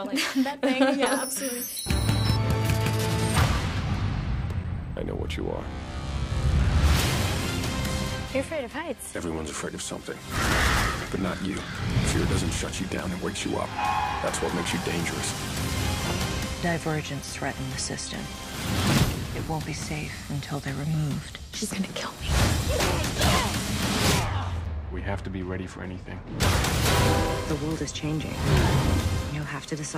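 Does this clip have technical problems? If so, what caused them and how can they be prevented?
Yes. A gap between chunks occurs at 4.64, 14.65 and 24.65 s. Each is a 6.5 ms hole repeating every 10 s, where silence sits at a chunk join while no sound is lost. Trimming codec padding and scheduling chunks gaplessly prevents it.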